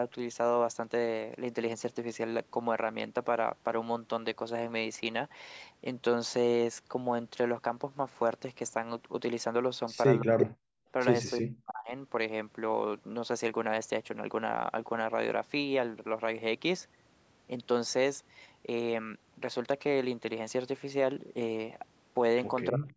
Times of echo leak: 10.39-10.46, 22.88-22.92

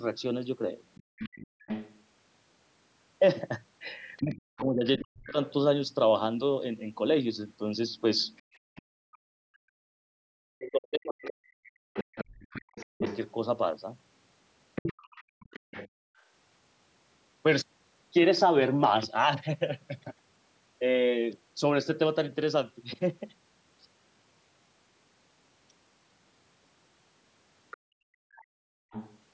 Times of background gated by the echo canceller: 1.03-1.66, 8.42-9.32, 15.00-16.27, 27.77-28.91

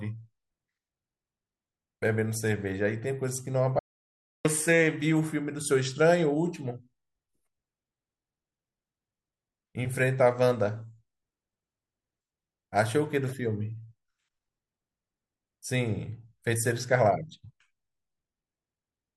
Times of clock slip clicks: none

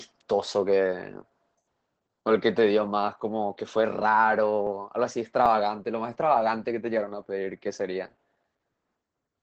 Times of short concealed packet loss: none

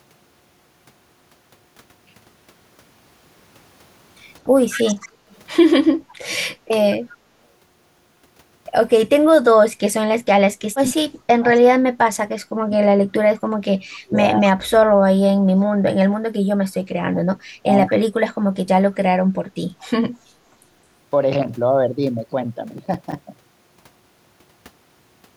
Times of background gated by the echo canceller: 5.18-5.30, 6.02-6.15

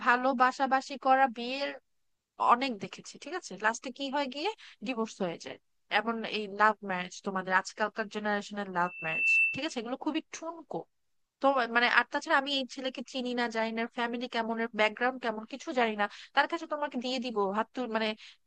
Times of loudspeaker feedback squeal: 8.81-9.79

